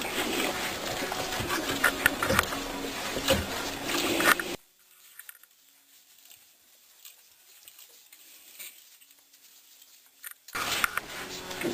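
From 1.41 s to 3.73 s, a call bitrate drop occurs: the encoder is starved of bits, which fits a fall from about 64 kbps to roughly 21 kbps, held at its lowest for about 2.3 s. The audio turns coarse and watery, with the top end dulled, until quality returns.

From 4.55 s to 10.55 s, one channel inverted is the likely cause. With opposite polarity, the shared content cancels in a mono mix, so the level falls by about 23 dB and only a faint residue remains.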